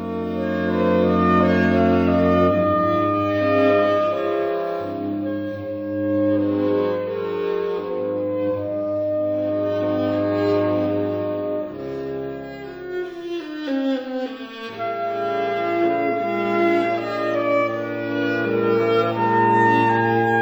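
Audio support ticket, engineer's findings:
No fault found on playback; nothing in the audio points to a defect in any component of the chain.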